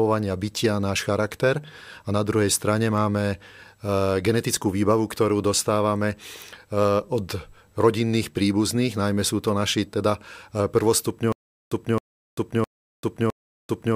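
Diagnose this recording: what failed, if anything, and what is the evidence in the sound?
Stutter with silent gaps runs from 11.32 s to the end of the speech. A fragment of about 0.27 s plays, then about 0.39 s of digital silence, and the same fragment returns every 0.66 s, four times over, with the speech never moving forward. That pattern points to the playback or streaming stage. The player likely stalled on an empty buffer, replayed its last chunk at each retry, then ran dry again, so the audio due in those seconds is lost.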